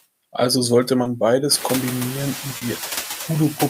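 Noise suppressor artifacts run through the whole of this speech recording. The processor judges which frequency bands hold steady noise in each frame and turns them down, here by only about 3 dB. The background therefore dips slightly between phrases and swells back under the voice. The room noise rises by about 19 dB at around one and a half seconds, leaving it only about 13 dB below the speech. Short concealed packet loss occurs at 1.03 to 1.07 s and again at 2.57 to 2.63 s. In each case a piece of the stream, 20 ms and then 40 ms, failed to arrive in time. The receiver filled the gap by extending the preceding sound, following its pitch if voiced or substituting shaped noise if not, then crossfaded back to real audio. Each gap is heard as a brief smear or wobble.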